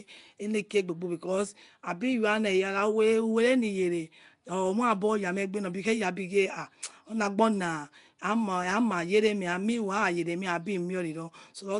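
Throughout, the speech likely went through Nellymoser compression, whose bit-starved bands are filled with noise, giving a rough, hissy, underwater smear with nothing above 10.6 kHz.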